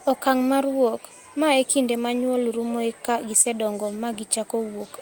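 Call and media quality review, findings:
Short concealed packet loss at 3.41–3.47 s, right after "ma nyuol rumoe ka". Brief smear in the speech there. Jitter buffer/decoder side: about 40 ms of audio arrived too late, so the receiver stretched the previous sound across roughly 31 ms, then crossfaded back into real audio.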